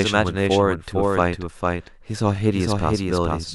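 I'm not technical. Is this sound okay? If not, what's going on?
No. The same speech has most likely been picked up twice, once through a slower route, giving a doubled audio track throughout. A noticeably quieter copy trails about half a second behind, so every phrase has a clean, flat echo stepping on it.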